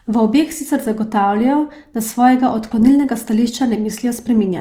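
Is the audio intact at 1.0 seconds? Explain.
No. At 1.0 s the speech carries Opus compression, present across the whole clip, most likely from encoding in its CELT music mode at a low rate, which fits roughly 24 kbps. Short of bits, the encoder fills bands with folded or noise-like content, so the speech sounds plainly grainy and rough. On a spectrogram the band stays fullband, reaching about 20.3 kHz, but the upper bands look blotchy and noisy rather than finely harmonic.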